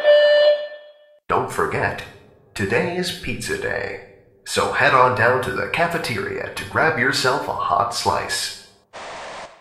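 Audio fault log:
Nothing to log here; there's no fault anywhere in this clip.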